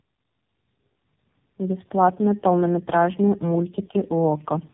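Rough, muffled and warbly speech runs the whole way through, with nothing above 3.8 kHz. That points to tandem speech coding: two low-rate speech codecs in a row, likely G.723.1 and then AMR-NB, the second re-encoding the first's already degraded output.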